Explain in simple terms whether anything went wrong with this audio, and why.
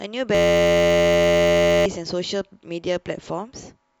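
A system hang loop runs from 0.35 to 1.86 s. The computer stalled while the sound hardware kept replaying one tiny 11.6 ms slice over a hundred times, which fits a 512-sample buffer. The speech becomes a steady 86 Hz buzz, and about a second and a half of speech is lost.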